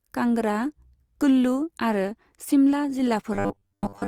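After "कुल्लु आरो शिमला", from 3.34 s to the end, speech turns into a rigid metallic 100 Hz buzz. This robotic sound likely comes from 10 ms buffers repeated over about 70% of that stretch.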